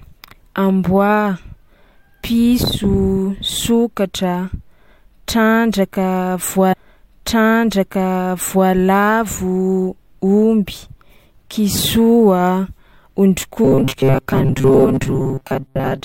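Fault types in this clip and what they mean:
Stream segment repeated: from 6.72 to 8.70 s, a stretch of about 1.98 s of speech plays a second time. The player fetched or queued the same chunk of the stream twice, so the programme jumps back with a small blip and repeats itself.
Robotic sound from repeated short buffers: from 13.65 s to the end, the speech becomes a rigid metallic buzz fixed at 134 Hz, which fits a block of about 7.5 ms being replayed. Most of the time is likely filled this way because fresh audio arrives too slowly.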